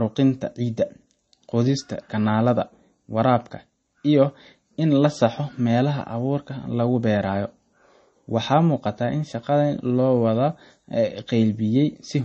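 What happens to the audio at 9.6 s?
At 9.6 s the speech carries the same damage heard across the whole clip, likely MP3 compression. Nothing sounds above 8.3 kHz, which fits a starved bitrate near 32 kbps. Weak frequency lines drop in and out between frames. That gives a plainly audible watery, swirling texture.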